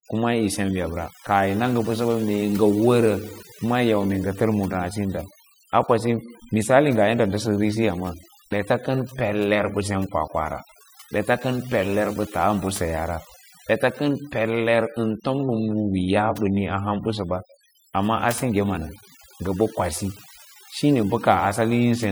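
Overdone noise removal runs throughout the speech. Bands near the noise estimate were cut away. Pauses drop to near silence with twinkling specks.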